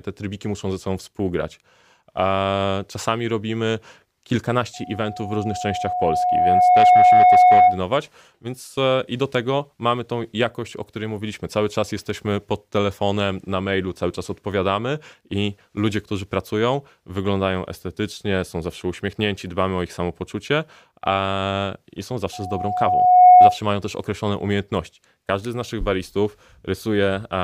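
From 4.74 to 7.83 s, loudspeaker feedback squeal swells over about two seconds into a 726 Hz tone, about 10 dB above the speech. The microphone is re-amplifying its own loudspeaker. It returns from 22.33 to 23.58 s at 726 Hz, building faster and louder, about 15 dB.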